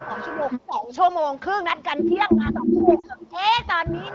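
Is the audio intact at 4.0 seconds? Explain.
Yes, at 4.0 seconds the audio is intact, with no fault present at that moment.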